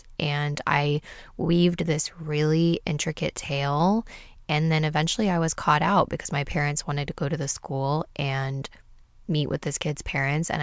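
Speech with no audible faults.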